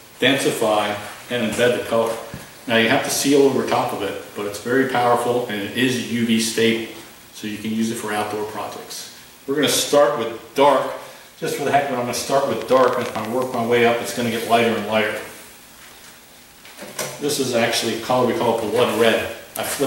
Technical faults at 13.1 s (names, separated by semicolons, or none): train of clicks